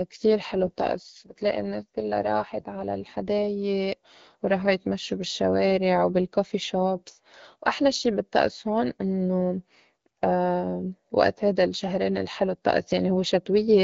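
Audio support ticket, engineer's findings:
AMR rate drop, 0.53 to 3.24 s. Radio link degraded; network forced the AMR-WB encoder into a lower mode, fitting a step from 12.65 to 8.85 kbit/s, with spare bits diverted to channel protection. Symptom: speech turns rough, buzzy and synthetic. Bandwidth held, no dropout or gap. Clean recovery at 3.24 s, back to the lighter coloration of the HD Voice path at its normal rate.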